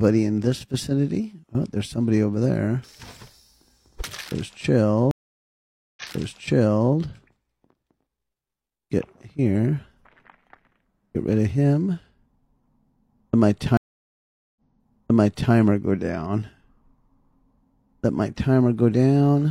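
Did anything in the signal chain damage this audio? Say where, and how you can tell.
Yes. At 5.11 s and 13.77 s, audio cuts out for 0.86 and 0.79 s, then replays about 0.98 s earlier. This is a network stream reconnect, where the decoder restarted on a resent burst.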